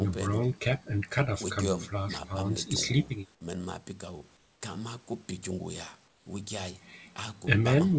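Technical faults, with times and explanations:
4.37–4.61 s and 6.08–6.26 s, comfort noise in place of the background: in each pause the real background gives way to flat, featureless hiss about 5–6 dB quieter, likely discontinuous transmission with synthetic fill.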